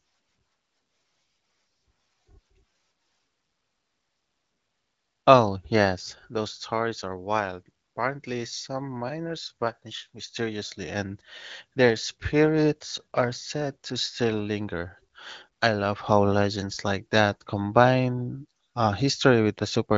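No technical faults are audible.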